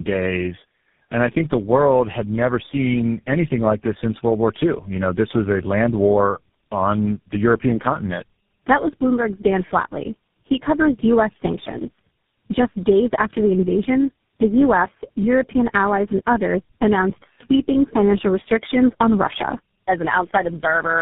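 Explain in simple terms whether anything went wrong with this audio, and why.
Tandem speech coding runs throughout: the speech sounds rough, muffled and warbly, like a call passed through several phone networks, each recompressing the previous one's already degraded sound.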